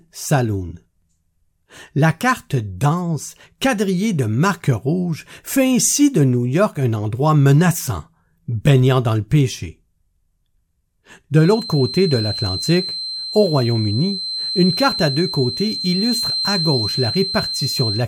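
From 11.33 s to the end at 18.08 s, a feedback whistle sits at 4.1 kHz, roughly 10 dB below the speech, thin, steady and swelling and fading slowly in level. A loudspeaker-to-microphone loop held just at the edge of runaway is the likely cause. On a spectrogram it shows as a narrow horizontal line.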